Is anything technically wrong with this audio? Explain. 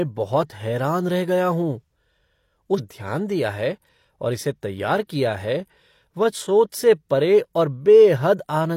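Yes. At 2.74 to 2.80 s the speech gives a small blip and lurches forward, landing on "दिया है और इसे" with a stretch of the programme simply gone. This is likely a stream segment skipped: one chunk of the segmented stream failed to load, so playback carried on from the following chunk.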